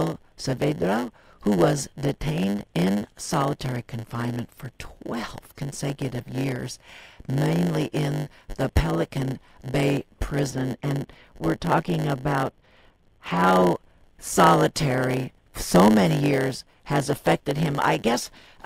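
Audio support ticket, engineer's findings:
Block size mismatch (padded), whole clip. Steady 100 Hz buzz under the speech. Delivery slowed to 0.919x, timbre unchanged. Probable component: buffer handoff between two stages. Upstream writes shorter blocks than downstream reads. Remainder of each block zero-filled. One short silent gap per block, 100 times a second, gives the buzz. Added silence stretches the timeline by the ratio of the two block sizes.

De-emphasis applied wrongly, 10.50 to 13.46 s. Speech turns dull and muffled there. Treble rolls off smoothly, about 11 dB down at 10 kHz relative to 1 kHz. Probable component: filter stage switched in for that stretch. A treble-cut curve meant to undo pre-emphasis, acting on audio with none, or a second pass over already-corrected audio. No boost to cancel, so the cut stays.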